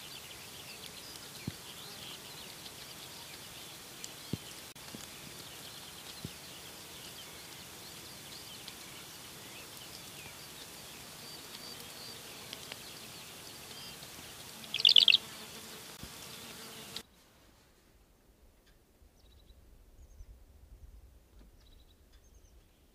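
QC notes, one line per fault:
4.72–4.76 s, gap at a join of encoded pieces: a 36 ms dropout cuts the sound with smeared edges, then it resumes where it stopped; untrimmed encoder delay and end padding from separately encoded pieces.
15.97 s, gap at a join of encoded pieces: a brief 18 ms hole opens and the sound carries straight on, left by the padding and start-up silence of two separately encoded pieces.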